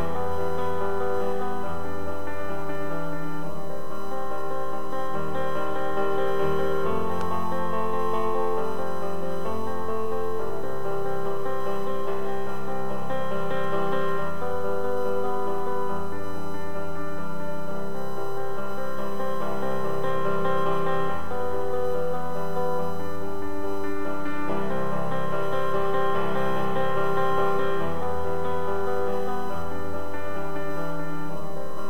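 A steady, thin whine sits under the sound for the whole clip, pinned at 1 kHz and strongest there, roughly 30 dB below the main signal. This is USB whine: the bus draws current in 1 ms frames, and that 1 kHz rhythm of current pulses leaks through shared power or ground into the analogue audio path, where it is heard as a fixed-pitch tone.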